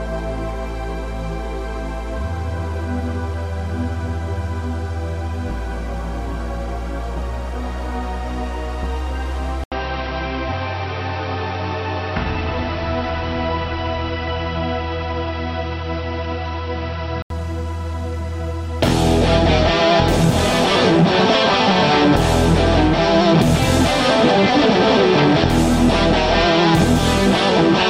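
From 9.64 s to 17.30 s, after an 80 ms gap at the switch, the sound turns dull and boxy. Nothing reaches above 5.8 kHz, the level shifts by roughly 5 dB, and a faint new background noise appears. The input likely switched to a poorer device.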